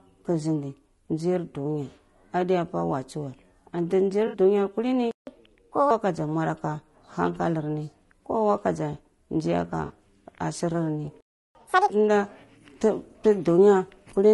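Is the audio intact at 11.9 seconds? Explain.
No. Catch-up at higher speed runs from 11.55 to 11.90 s, ending right at that moment. After a stall, the player resamples its backlog at double speed to recover lost time, so the sound rushes and rises roughly ten semitones before snapping back to normal pitch.

Low-delay AAC compression also colours the whole clip, including this moment. The speech sounds plainly rough and grainy, with noise filling the gaps between harmonics and a thin, synthetic top band. That fits AAC-ELD at a low bitrate, around 32 kbps, as the likely cause.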